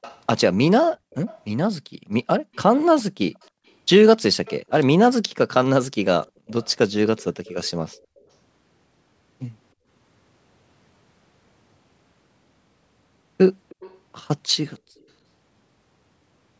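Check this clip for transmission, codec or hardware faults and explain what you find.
Two faults recur through this speech: a leaking echo and a gated background.

Echo leak, from 0.01 to 1.39 s, 2.54 to 4.81 s, 6.23 to 8.19 s and 13.69 to 15.05 s: a faint copy of the speech trails it by 313 ms, roughly 25 to 30 dB down. The likely cause is a far-end loudspeaker whose canceller let residue back. The fixed delay separates it from room reverberation.

Background gated by the echo canceller, at 0.97 to 2.53 s, 3.51 to 3.64 s, 6.34 to 6.43 s and 9.74 to 9.87 s: the canceller ducked the microphone, and room tone dips by about 38, 37, 33 and 24 dB for brief moments. The dips follow loudspeaker activity rather than silence, which distinguishes them from a noise gate.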